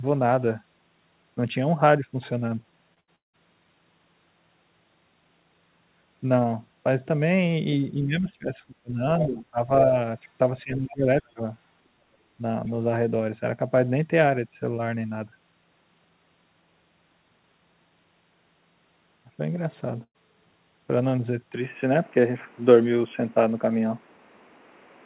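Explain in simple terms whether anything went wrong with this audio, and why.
Several things went wrong. At 2.94 s, a short concealed packet loss leaves a brief smear where a sliver of audio was lost and patched over.

Right after, from 3.0 to 3.1 s, a burst of packet loss is patched by stretching the last sound until it fades. Then it jumps ahead.

From 3.16 to 3.35 s, a long network dropout is the likely cause of the last sound fading and then near silence. About a fifth of a second is gone.

Between 7.93 and 9.01 s, from 9.26 to 9.69 s, and from 10.63 to 11.41 s, the speaker dips. This is speech suppressed in double talk, likely because both sides talked at once.

At 9.20 s, and from 10.90 to 10.94 s, scraps of another voice slip through. That is most likely the other side's voice leaking through from a loudspeaker.

From 20.03 to 20.16 s, another burst of packet loss leaves the last sound fading and a brief gap. 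Part of the speech is missing.

From 21.54 s to the end, the sound turns duller. The level also shifts and new background noise appears. The input was likely switched to a poorer device.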